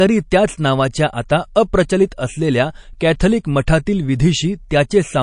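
MP3 compression damage runs throughout the speech, likely from encoding at a low bitrate around 40 kbps. Weak frequency lines drop in and out between frames, giving a watery, swirly texture, metallic chirps on s sounds and smeared consonant attacks.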